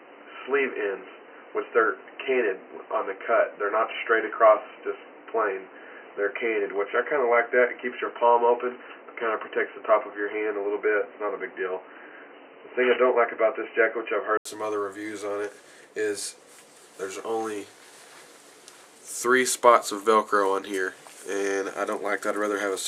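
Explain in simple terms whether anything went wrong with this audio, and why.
For the first 14.45 seconds the audio sounds dull and boxy, with nothing above 3 kHz. It then clears after a brief gap, likely an input switched to a poorer device.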